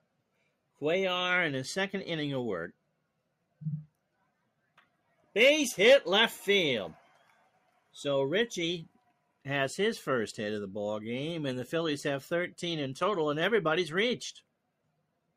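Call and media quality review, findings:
Noise suppressor misclassified wanted sound as noise, 7.08–7.94 s: sound cut by the noise suppressor, level sinking by up to about 12 dB for roughly 0.7 s.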